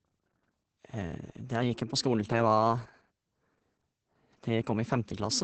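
Opus voice compression runs through the whole speech clip. Nothing survives above 8.6 kHz, and heavy SILK coding leaves the voice muffled, hoarse and slightly robotic, which fits about 10 kbps.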